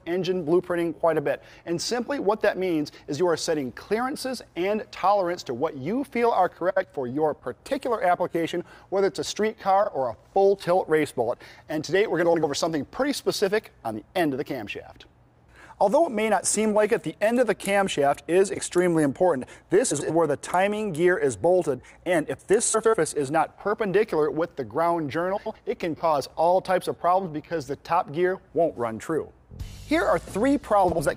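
Frames out of order occur eight times: at 6.70 to 6.85 s, 9.83 to 9.89 s, 12.25 to 12.44 s, 18.54 to 18.60 s, 19.91 to 20.11 s, 22.74 to 22.94 s, 25.36 to 25.56 s and 30.84 to 31.00 s. Each time, two adjacent blocks of 23.2, 69.7 or 92.9 ms play swapped, which fits runs of roughly 23 ms codec frames. This gives a brief garbled flutter. Unlike a dropout or a repeat, nothing is lost or doubled, and the timing afterwards stays intact.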